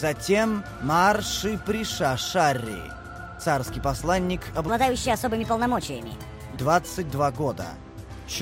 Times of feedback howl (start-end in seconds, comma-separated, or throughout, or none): none